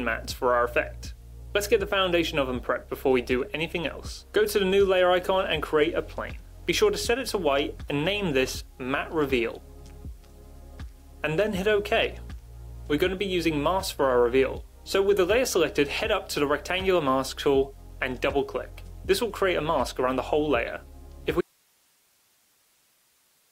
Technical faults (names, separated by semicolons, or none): audio dropout to a faint residue